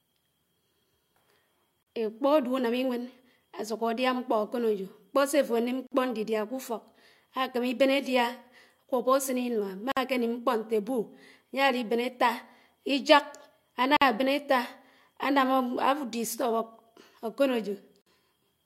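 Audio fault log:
1.83, 5.87, 9.92, 13.97 and 18.02 s: gap at a join of encoded pieces. Silences of 39 ms, then 49 ms each, break continuous speech every 4 s with smeared edges. Separately encoded segments were joined with encoder start delay and last-frame padding left in.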